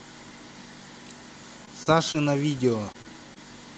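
Short concealed packet loss occurs six times, at 1.65–1.69, 1.83–1.88, 2.12–2.16, 2.92–2.96, 3.02–3.06 and 3.34–3.38 s. Each time, 20 ms of audio failed to arrive (40 ms at 1.83 s), and the receiver extrapolated the preceding sound before crossfading back. Each gap is heard as a brief smear or wobble. On a spectrogram, harmonics run unnaturally flat or blur into noise across the gap. The waveform shows a smoothed, repetitive stretch with a soft seam at each end. The call codec's band limit near 12 kHz shows throughout.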